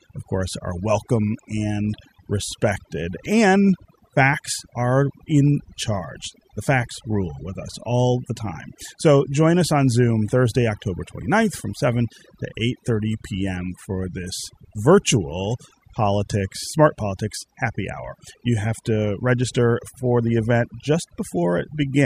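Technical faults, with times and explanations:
Throughout: overdone noise removal, with aggressive spectral suppression gating bands near the noise floor, leaving twinkling specks in near-silent gaps and stripping quiet parts of the voice.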